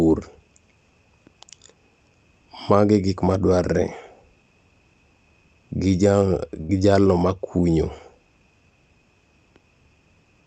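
At 6.61 s, a burst of packet loss hits the speech. The receiver stretches the last sound, fading it out. About 80 ms vanishes before "gi jalo makunyo".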